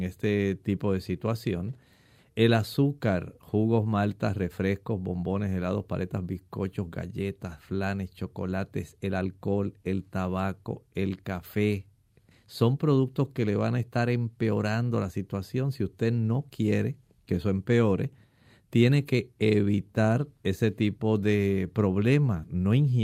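No technical faults are audible.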